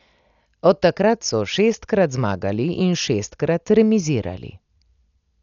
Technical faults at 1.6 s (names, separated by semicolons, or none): Dolby Digital compression